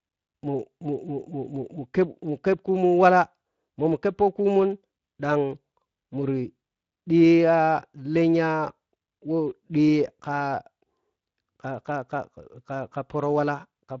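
Throughout, the speech passed through the Speex codec at a bitrate that points to roughly 20 kbps, leaving it audibly coarse, hoarse and noisy.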